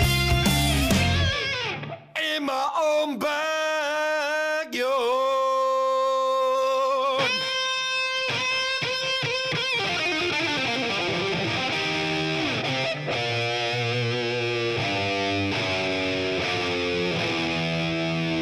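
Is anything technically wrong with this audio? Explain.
Yes. From about 8.77 to 8.83 s, roughly 43 ms, there is AAC frame loss with concealment, a length that fits two missing AAC frames. With no data for that stretch, the decoder rebuilt it from the last good spectrum, keeping the energy but randomising phase and sign. The result is a brief smeared, noisy or phasey blur. Unlike a plain dropout, there is no silent gap or click, just a patch where detail and transients dissolve before clean audio resumes.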